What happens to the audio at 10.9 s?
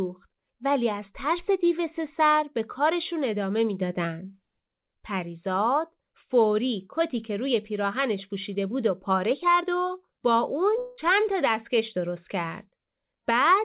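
From 10.78 to 11.00 s there is a long network dropout, most likely a run of lost packets. For about 0.2 s the receiver fills the gap by stretching the last sound into a fading buzz or hiss, with no silent stretch before the audio resumes and the lost part is skipped. On a spectrogram this appears as smeared, repetitive horizontal bands below the 4 kHz ceiling of the G.711 call path. The waveform shows a decaying, unnaturally periodic envelope.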